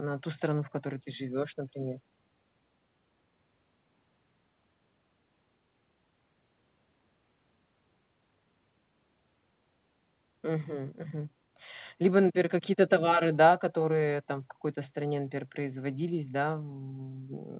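Speech clip with no faults.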